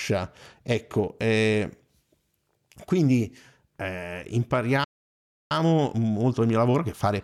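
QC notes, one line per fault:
4.84 to 5.51 s, playback stall: the speech just drops out mid-flow and the output sits silent for roughly two-thirds of a second (about 670 ms) before picking up again where it left off. That dead gap is most likely the player running dry on data or having its output thread held up, so there was simply nothing to play until it recovered.
5.51 to 7.24 s, time-compressed catch-up: right after the gap the speech comes back hurried, running at about 1.15 times normal speed all the way to the end, yet the pitch stays where it should be. That's the player clawing back its backlog by snipping out tiny slices and cross-fading over the joins, which keeps the pitch steady.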